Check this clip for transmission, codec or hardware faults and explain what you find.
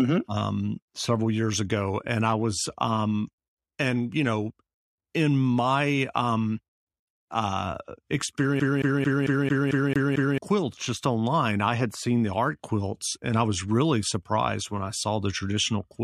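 One fault is present: the speech gets caught in a CD stuck on one turn from 8.60 to 10.38 s. A scratch keeps knocking the laser back one track at the same point on each rotation, so a 0.22 s slice of speech plays eight times in a row, each jump marked by a brief mute. The result is a rapid, metronome-even stutter. On a waveform the same short shape repeats with tiny gaps between copies. On a spectrogram it shows as identical blocks tiled side by side.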